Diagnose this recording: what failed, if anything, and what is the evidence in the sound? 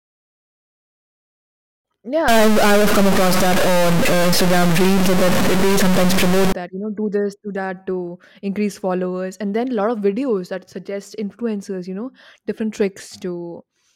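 A converter or data-line fault is the likely cause: one fairly high-order bit appears stuck from 2.28 to 6.52 s, ending just before "that you know do". Roughly half the samples are pushed off by a fixed step, about 10 dB below full scale, in a pattern that follows the speech waveform. The stuck bit produces harsh, buzzy distortion over the speech, and because the error flips with the sign of small values, the pauses in that span fill with loud noise.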